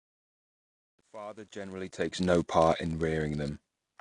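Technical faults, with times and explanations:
Throughout, block size mismatch (padded): A steady buzz near 99.6 Hz sits under the speech, and the whole clip runs about 0.4% slow (a speed of 0.996). One stage hands over blocks a little shorter than the next stage reads, and the missing part of each block is filled with zeros. That tiny gap repeats once per block, which produces the buzz at the block rate, and the padding stretches the timeline by the ratio of the two block sizes.
Throughout, AAC compression: The speech sounds dull and smeared, the codec damage is plainly audible, and nothing is present above 9.8 kHz. This likely comes from AAC-LC coding at a low bitrate, which fits something around 32 kbps. The encoder quantises each frame's frequency lines against a hearing model. At low rates it drops the top of the band and spends too few bits on what remains, so detail blurs and the high end is cut off.
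0.00 to 2.42 s, truncation distortion on a fade: The quiet stretch of the fade sounds gritty and coarse. It is at its worst from 0.00 to 1.71 s and clears by 2.42 s. A fade or gain stage kept too few bits, which fits about 11 bits, and added no dither. As the level drops toward the smallest step, the waveform collapses into a few square steps. That turns low-level detail into granular distortion tied to the signal.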